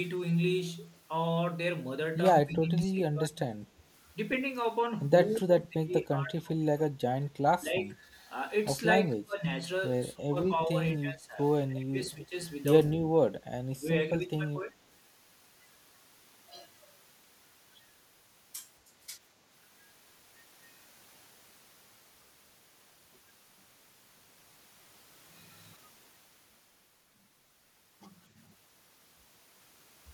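Speech suppressed in double talk pulls the talker down at 2.42–3.52, 5.39–7.02, 7.63–7.95, 9.14–9.45, 10.13–12.35, 13.0–13.32, 13.79–13.86 and 14.2–14.75 s. This is likely an echo canceller mistaking overlapping talk for echo. The waveform shows abrupt notches, from slight to about 25 dB deep.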